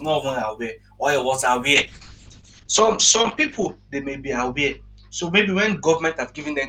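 From 1.74 s to the end of the clip, a call bitrate drop occurs: the bandwidth estimate collapses and the encoder is starved of bits, consistent with a fall from about 32 to 8 kbps. Highs above 8 kHz vanish, and the speech turns muffled and coarse, bottoming out for about 1.93 s.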